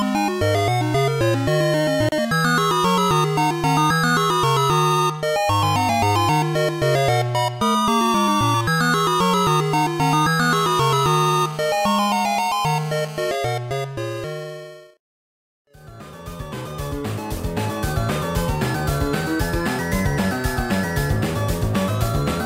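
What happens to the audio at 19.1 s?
Nothing goes wrong at 19.1 s; the audio plays through that moment intact, with no dropout, click, glitch or other fault.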